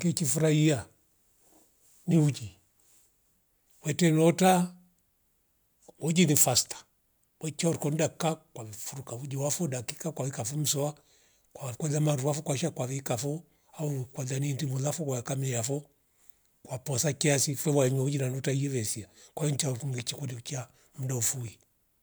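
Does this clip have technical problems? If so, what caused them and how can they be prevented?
No, there's nothing here that needs fixing, so there's no cause to track down and nothing to guard against this time.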